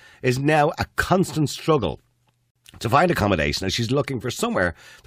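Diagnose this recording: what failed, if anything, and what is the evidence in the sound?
Codec stage: pieces joined without trimming encoder delay and padding leave a gap at a join of encoded pieces, so a 51 ms gap opens in the speech at 2.51 s, its edges smeared so the silent part is shorter.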